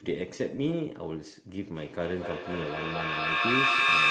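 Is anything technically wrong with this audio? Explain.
Yes. From 1.75 s to the end there is feedback echo between two devices. A second device replays this microphone's audio, roughly every fifth of a second, and the repeats build to about 9 dB above the speech. Unlike room reverberation, the repeats come at a fixed interval and grow instead of decaying.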